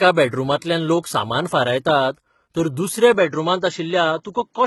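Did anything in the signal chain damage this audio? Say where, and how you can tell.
Yes. At the codec stage, heavy HE-AAC compression runs throughout, with nothing above 11.8 kHz. The treble sounds rebuilt rather than simply cut, fitting roughly 16 kbps, unlike a plain low-pass.

At the input stage, from 3.14 s to the end, the band abruptly narrows to nothing above 7.6 kHz, with new background noise about 50 dB down. There is no gap and no level jump, so the input likely switched to a poorer device rather than dropping out.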